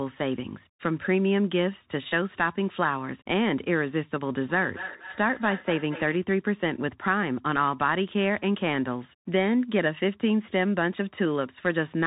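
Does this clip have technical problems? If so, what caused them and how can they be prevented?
Yes. Throughout, the Bluetooth CVSD headset codec limits the sound. Its adaptive one-bit coding cuts everything above 3.8 kHz and adds scratchy, granular hiss. On a spectrogram this appears as a flat ceiling with speckled noise beneath. Using a wideband headset mode or a wired microphone prevents it.

From 4.5 to 6.24 s, a feedback echo between two devices returns each sound roughly a fifth of a second later, about 12 dB quieter. A spectrogram shows faint, evenly spaced trailing copies. Keeping only one device on the call per room, or muting the second device's speaker, prevents it.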